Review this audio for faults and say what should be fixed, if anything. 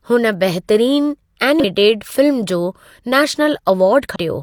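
Damaged data in the compressed stream shows up twice, at 1.60–1.65 s and 4.12–4.16 s, as short glitches in the speech. Corrupt bytes there make the decoder misread frames, lose sync and hunt for the next valid header. Re-fetch the file from an intact source and verify checksums in transfer.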